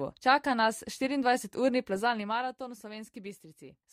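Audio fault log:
1.95 to 2.60 s, zipper noise: the level drops by about 10 dB in coarse 2 dB steps rather than one continuous ramp, roughly ten steps a second, and each abrupt jump in gain leaves a small click, so a rapid ticking rides on the sound while it falls. On the waveform the envelope descends as a staircase; on a spectrogram each step shows as a faint broadband vertical line, evenly spaced across the fade.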